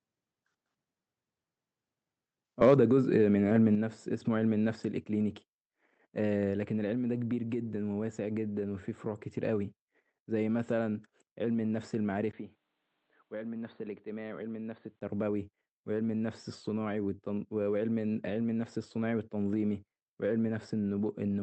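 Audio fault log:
2.62–2.74 s, microphone overload: The loudest peaks push about 4 dB past the converter's ceiling, and a small share of samples get their tops flattened. That squared-off waveform adds a harsh, crackling edge. The cause is likely an input volume set too high.
2.74 s and 3.75 s, microphone volume stepped down: The level drops abruptly, first by about 3 dB right after the distorted peak, then by about 5 dB a second later. The voice and the background fall together in single steps, likely the call software pulling the device's input gain down after clipping.
12.31–15.01 s, input switched to a poorer device: After a 20 ms gap the sound turns dull and boxy. It is a little quieter and carries a faint new noise floor. At 15.01 s it clears again. The likely cause is the input jumping to a narrower-band microphone and back.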